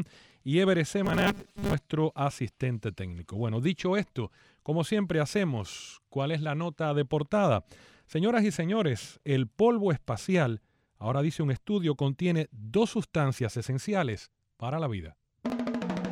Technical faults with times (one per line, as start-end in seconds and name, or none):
1.05-1.73 robotic sound from repeated short buffers